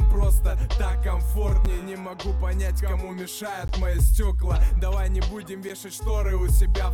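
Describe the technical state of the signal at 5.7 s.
A brief hard-edged dropout to silence, about 10.4 ms long, cuts into the sound at 5.69 s. This is a gap between stream segments: the timestamps of adjacent segments don't meet, so the player pads the hole with silence. No audio is lost, and the timing fits 2-second segments.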